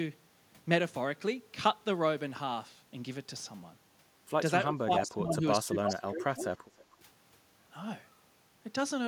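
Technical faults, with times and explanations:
4.67–6.47 s, speech suppressed in double talk: the speech dips by around 20 dB in pieces totalling about 1.5 s, likely from an echo canceller damping both sides during overlap.
5.85–5.93 s and 6.77–6.84 s, echo leak: brief repeated scraps trail the speech by about 0.31 s, first near full level, then about 30 dB down, likely from uncancelled loudspeaker pickup.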